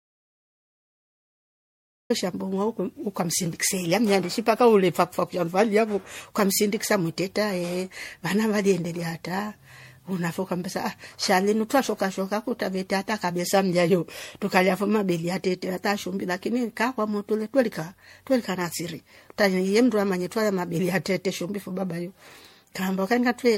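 Audio dropout to silence runs from the very start until 2.1 s. The signal was already missing when the clip begins, and the recorder kept writing silence, likely because the input was disconnected or muted. The opening is dead digital silence with no room tone before the speech appears mid-flow.

Generation loss is audible throughout. The speech sounds swirly, hollow and smeared, with blurred consonant attacks and nothing above 16.5 kHz. This likely comes from roughly seven rounds of lossy re-encoding, consistent with a 64 kbit/s MP3 chain, each pass adding fresh quantisation damage.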